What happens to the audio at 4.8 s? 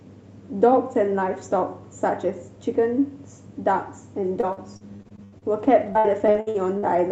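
At 4.8 s the speech is inside a run of repeated packet loss from 4.25 to 6.95 s: holes up to 82 ms are patched by extending prior sound, giving choppy, robotic audio with smeared, repeated spectrogram frames.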